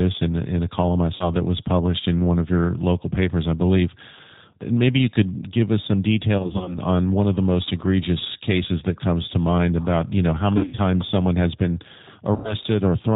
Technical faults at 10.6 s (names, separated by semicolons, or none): G.729 codec; VoIP packet loss concealed by the speech codec